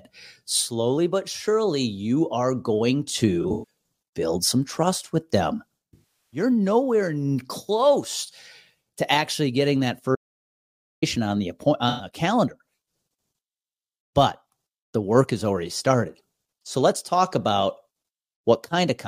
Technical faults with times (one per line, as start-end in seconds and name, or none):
3.42-3.64 AAC frame loss with concealment
5.93-6.40 AAC frame loss with concealment
10.15-11.02 audio dropout to silence
11.89-12.07 AAC frame loss with concealment